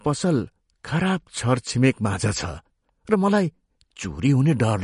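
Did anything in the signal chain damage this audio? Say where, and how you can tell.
Yes. The damage sits at the codec stage and runs through the whole speech clip. Nothing is left above 10.6 kHz, a hard treble ceiling rather than a gentle roll-off. The sound has a watery, swirling texture, and s sounds carry metallic chirps. This is likely MP3 compression at a low bitrate, which fits roughly 40 kbps. Starved of bits, the encoder discards the top band and zeroes weak frequency lines that flicker on and off between frames.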